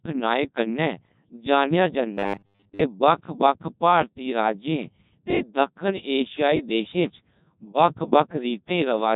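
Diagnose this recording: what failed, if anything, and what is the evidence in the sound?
The codec stage failed: the speech runs through a Codec 2 vocoder for its full length, and the heavy damage fits a rate near 1.2 kbit/s. A spectrogram shows smooth synthetic harmonics with no fine waveform detail, because the decoder rebuilds the voice from sine waves and sounds buzzy and robotic.

From 2.14 to 2.83 s the sound becomes a rigid, metallic buzz at 100 Hz that only loosely follows the speech. The likely cause is at the driver or buffer stage: a 10 ms stretch replays while most of the real audio in that span is skipped. The waveform shows roughly repeating cycles, and the spectrogram shows flat, evenly spaced 100 Hz harmonics.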